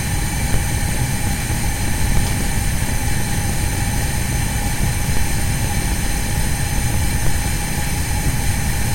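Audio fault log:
0.54 s, 2.17 s, 5.17 s, 7.27 s: DC step. The waveform's zero line jumps by about -7 to -8 dBFS and then settles back, as a 5 Hz high-pass drains the offset. Each jump gives a low thump while the audio carries on intact, unlike a dropout or click, which breaks the signal itself.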